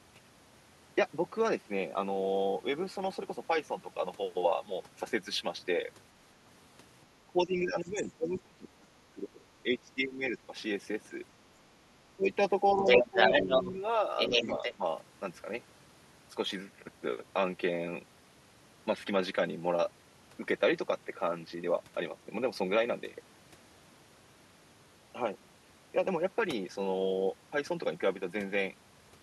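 A speech recording with two related echo-control faults clustered between about 7 and 15 seconds. Speech suppressed in double talk appears from 7.27 to 10.53 s, 12.06 to 12.29 s, 12.74 to 13.83 s, and briefly from 14.77 to 14.84 s. The talker's level dips by up to around 20 dB, in patches totalling about two seconds in the first stretch, and by about 20 to 10 dB in the later ones. The likely cause is an echo canceller that could not tell near-end speech from loudspeaker echo while both sides spoke at once, and so attenuated everything. The other side's voice leaking through is heard from 7.89 to 7.96 s as a faint scrap far below the talker, from 12.79 to 13.73 s at roughly the talker's level or slightly above, and from 14.17 to 14.75 s at about equal level. That is the far end's audio played from the device's loudspeaker, picked up by its microphone and likely left incompletely cancelled, mostly overlapping the same moments where the near-end speech is being ducked.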